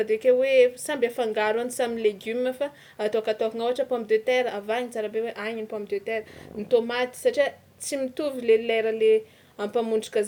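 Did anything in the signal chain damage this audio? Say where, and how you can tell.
Yes. Low bit depth without dither runs through the whole speech clip. Quiet passages turn gritty, and the grain tracks the signal, sitting about 40 dB below it. That points to likely truncation to roughly 9 bits at a sample-format conversion, with no dither.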